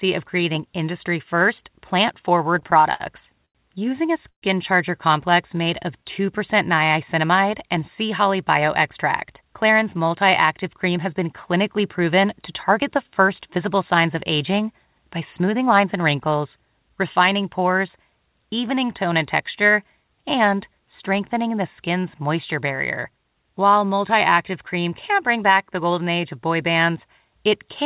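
From 2.44 to 3.02 s the speech has repeated stalls (stutter). The jitter buffer ran dry six times in just over half a second, and each time the receiver extended the last sound until packets caught up. Those fills total 117 ms, about a fifth of the span, with the longest at 58 ms, so the speech drags and judders. On a spectrogram the harmonics freeze into short flat stretches that fade in the longer gaps. The waveform shows repeated, near-identical cycles at each stall.

A short stall from a late packet follows at 3.46 to 3.57 s. One packet missed its playout time, so the receiver held the last sound for 91 ms and then resumed where it had stopped. That adds 91 ms of delay, and nothing is lost. It is heard as one drawn-out sound with a faint buzz. On a spectrogram it is a single horizontal smear of unchanging harmonics. In the waveform it appears as a run of copied periods that dips slightly in level.

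At 4.29 to 4.44 s there is a call audio freeze. The sound hangs as a buzzy continuation that fades into 90 ms of silence, then picks up again with nothing skipped. In total it inserts 134 ms. The likely cause is packets held up in transit, which emptied the buffer. On a spectrogram the frozen tone tapers into a blank column. The waveform decays to a flat line.

From 5.31 to 6.87 s comes a jitter buffer slow-down. To build up its reserve, the receiver repeated single pitch periods and bits of pauses, adding 108 ms. Playback runs at 94% speed with the pitch unchanged, so sounds stretch out. On a spectrogram the formants are elongated while the harmonic spacing stays the same. In the waveform, repeated cycles sit back to back.

There are two jitter buffer speed-ups, at 8.89 to 10.22 s and 10.63 to 12.25 s. Here the buffer held more than its target, so the receiver cut out short stretches of pitch periods. 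The first runs at 105% and drops about 70 ms. The second runs at 107% and drops about 100 ms. The speech sounds hurried but keeps its pitch. On a spectrogram the syllables are compressed in time with the harmonic spacing unchanged, and the waveform shows whole cycles missing at the splice points.

Throughout, the call path passes nothing above 4 kHz. That bandwidth, together with the coding noise, fits G.711 mu-law at 64 kbps, and on a spectrogram it shows as a hard ceiling across the whole clip.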